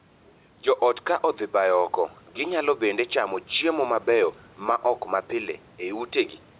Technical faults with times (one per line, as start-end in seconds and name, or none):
0.00-6.60 gain pumping